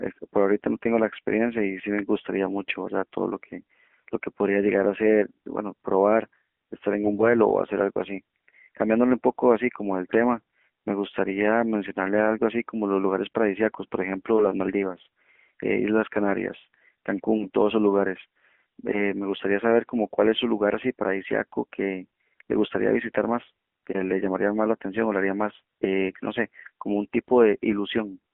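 From the first second to the end, the speech has gone through an AMR narrowband mobile codec. The voice is boxed into roughly 200 Hz to 3.4 kHz, with nothing above 4 kHz, so it sounds like an old phone call. The codec rebuilds the voice from a vocal-tract model fed by a handful of pulses every 5 ms. At this low rate the damage is plain: a buzzy, synthetic edge that fits the 7.4 kbps mode.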